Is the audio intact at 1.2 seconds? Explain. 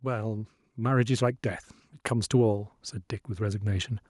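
No. At 1.2 seconds the speech is in the middle of an automatic gain rise that runs from 0.05 to 1.47 s. The gain control judged the input too quiet and kept turning it up, by about 6 dB in total, so the voice and the background noise swell together. On a waveform the envelope widens steadily across that span; on a spectrogram the whole band, noise floor included, brightens gradually rather than in a step.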